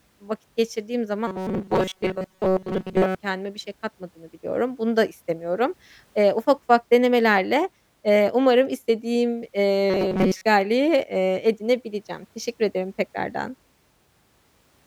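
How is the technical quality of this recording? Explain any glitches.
There are two stretches of robotic sound from repeated short buffers, from 1.27 to 3.15 s and again from 9.90 to 10.45 s. The speech goes hard and metallic, with a fixed buzz at 188 Hz. That's likely the playback looping a roughly 5.3 ms chunk while new audio runs late, with most of the real signal skipped.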